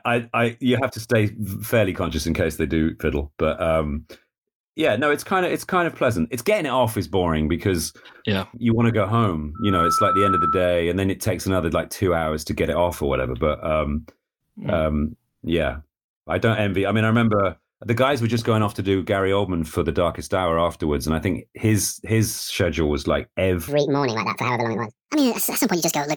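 From 9.55 to 10.74 s, a 1.3 kHz tone swells within about a third of a second to roughly 5 dB above the speech. This is loudspeaker feedback squeal, where the microphone-to-speaker loop exceeds unity gain at that frequency. From 23.68 s to the end, the speech turns high and hurried, about ten semitones up at 1.68 times speed. This section at the wrong speed was likely played against the wrong clock.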